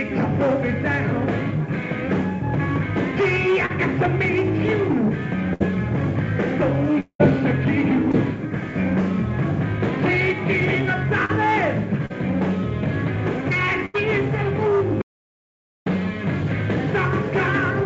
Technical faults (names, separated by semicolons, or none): short concealed packet loss; burst of packet loss; long network dropout; audio dropout to silence